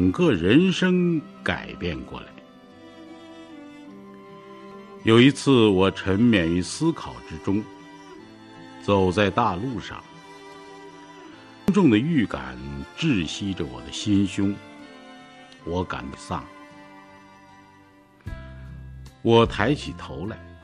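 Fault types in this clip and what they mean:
Damaged data in a compressed stream: at 4.72 s, 11.68 s and 16.14 s, corrupted bytes in the encoded stream cause the decoder to misread or reject frames and lose sync while it hunts for the next valid frame header. Each instant is a glitch such as a chirp, squawk, click or short hole, not the sound itself. A network dropout leaves a gap or muted stretch, and a plain click is a single broadband tick.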